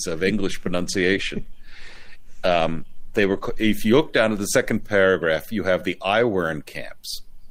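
From 0.78 s to 3.79 s a call bitrate drop takes hold: the encoder's budget falls from 48 to 18 kbps and stays at the floor for nearly 3 s. The sound turns coarse and watery. A spectrogram shows smeared, blotchy detail until the rate recovers.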